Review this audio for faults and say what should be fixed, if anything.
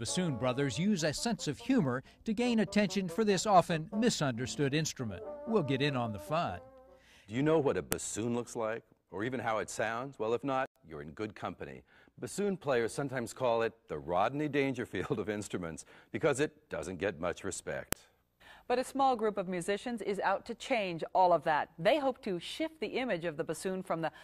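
A file header played as audio causes a sharp, loud click at 7.92 s and 17.93 s, 10 s apart. At each joined piece's start, its WAV header bytes play as samples. Strip each header before joining or streaming the pieces.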